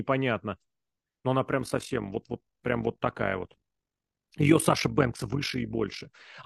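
A speech recording carrying overlap-add ripple from 1.6 s to 6.11 s. Across that span the level pulses by about 11 dB at a rate of around 50 per second, giving a fast, rough flutter with a tremolo quality. The cause is frame-based processing where the windowed frames were rejoined with an overlap whose windows do not sum to a constant gain, so loudness dips and recovers once per frame.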